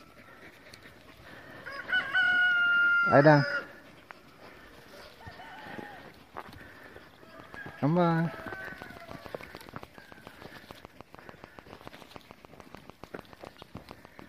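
A recurring pulse is getting into the signal path from 7.4 s to 14.2 s, most likely interference from nearby equipment or a faulty connection or power supply. The result is a train of clicks: around fifty near-identical pops at a regular 6.92 per second, each peaking roughly 5 dB above the surrounding audio. They sit on top of the sound and carry on through any pauses, so the second half of the clip has a steady ticking running through everything.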